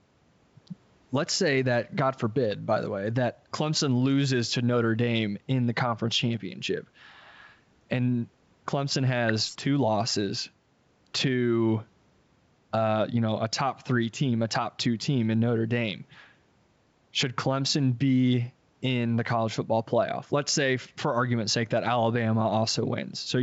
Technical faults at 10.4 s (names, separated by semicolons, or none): none